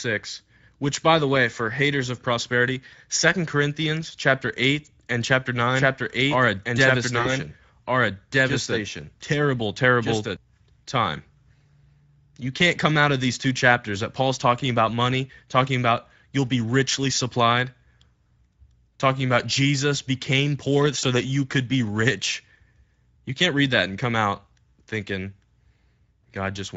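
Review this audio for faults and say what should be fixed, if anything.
Speex codec, throughout the clip: the speech sounds hoarse and noisy because this CELP coder spends few bits on the excitation signal, and any band above 4 kHz becomes a shaped noise fill. The damage fits a middle-quality setting near 16.8 kbps. To prevent it, record or transmit with a modern codec such as Opus, or raise the Speex quality setting.

Doubled audio track, 5.74 s to 10.36 s, starting just after "and chapter": a second full-band copy runs about one and a half seconds behind the original at roughly the same level. It has no room colour and switches on and off abruptly. The likely cause is the same signal being captured again through a slower path. To prevent it, monitor only one capture route, or remove the duplicate in the edit.

VoIP packet loss concealed by the speech codec, 7.21 s to 7.29 s and 20.99 s to 21.06 s: the second event falls between "became poor" and "that you could be". 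Each time, about 40 ms is missing, which fits two lost 20 ms frames. The decoder fills the gap by extending the last pitch and filter, so the sound becomes a fading buzzy tone or coloured noise that stays weak briefly after the packets return. To prevent it, use a steadier network path with a jitter buffer and forward error correction.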